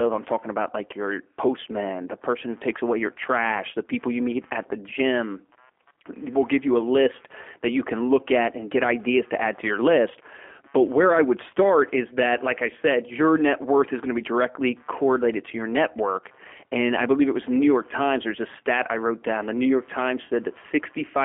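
A speech recording carrying G.729 codec damage from start to finish, plainly audible throughout. The sound has the rough, slightly synthetic quality of a low-rate CELP voice codec, which rebuilds each 10 ms frame from a vocal tract filter, a pitch predictor and a few pulses rather than the original waveform. The band is held to a telephone line of roughly 250 Hz to 3.4 kHz, with nothing above 3.5 kHz, and the coarseness fits an 8 kbit/s G.729A stream.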